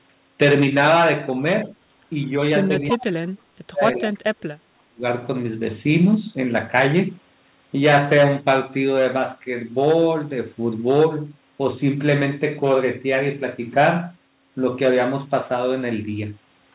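This is a speech recording with two brief ghostly repeats of the talker: faint scraps at 2.23 s and again, louder, at 2.88 s. Each trails the original by 335 ms, the first about 20 dB below the speech and the second about 10 dB below. This is an echo leak, likely from a far end on loudspeaker whose echo canceller let part of its microphone pickup return down the line. Between 2.66 s and 5.03 s the voice repeatedly sinks and breaks up, losing roughly 2 seconds in total, with the deepest dips about 35 dB down. That pattern is speech suppressed in double talk, likely the canceller mistaking overlapping talk for echo and attenuating everything. The band stops at 4 kHz, which fits a G.711 A-law telephone call path.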